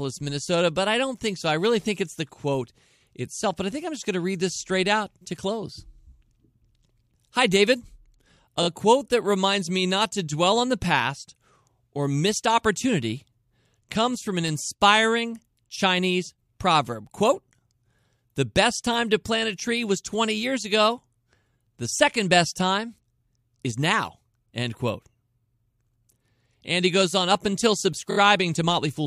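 Near the end of the speech, from 28.10 to 28.17 s, there are repeated frames: one compressed block of about 23.2 ms, which fits a 1024-sample frame at 44.1 kHz, plays three extra times, adding 69.7 ms. It sounds like a brief machine-gun stutter. On a spectrogram the same narrow slice of harmonics appears four times side by side. The waveform shows an identical short cycle tiled in a row.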